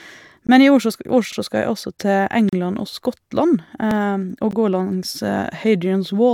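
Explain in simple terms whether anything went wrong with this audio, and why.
Two things went wrong in how this speech was streamed. First, a gap between stream segments: the audio arrives in two-second pieces whose timing doesn't quite line up, so the player fills the holes with silence. You hear brief hard-edged dropouts at 0.47 s, from 2.49 to 2.53 s, and at 4.51 s, lasting roughly 15 to 36 milliseconds, with nothing actually missing.

Second, overlapping chunks: the sound was handled in 2.5-second blocks, and each block started 50 milliseconds before the previous one finished. That sliver plays twice, giving a small stutter or click from 1.33 to 1.38 s and again from 3.91 to 3.96 s.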